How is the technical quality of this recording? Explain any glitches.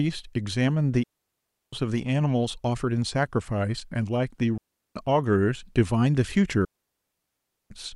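The recording has three digital wireless dropouts, where the speech cuts to near silence and then comes back. They run from 1.03 to 1.73 s (about 0.69 s), 4.58 to 4.96 s (0.38 s), and 6.65 to 7.70 s (1.06 s). The receiver stopped getting enough usable data from the transmitter, so it muted with a very quick fade. That's why each gap is a clean hole, with no crackle or noise burst on either side.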